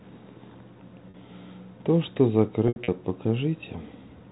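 At 1.10 to 1.14 s, and scattered across 2.68 to 2.88 s, packet loss with pitch repetition bridges missing audio by looping the last pitch period, producing a held, buzzy tone. On a spectrogram this shows as frozen harmonic stripes. In the second stretch, 120 ms is lost and the longest run is 80 ms; the waveform repeats identical cycles that fade toward silence, then cross-fades back, all within the 4 kHz telephone band.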